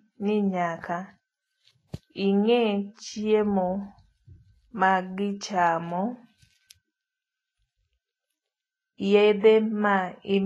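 Speech that sounds hissy and grainy from start to finish, with nothing above about 11.6 kHz, a roughened edge on voiced sounds and softened consonant attacks. The likely cause is Vorbis compression at a low setting, which fits a bitrate of around 23 kbps. At that rate the encoder lowers its cut-off and quantises the upper band so coarsely that fine treble detail is replaced by noise of similar energy, which produces this plainly audible graininess.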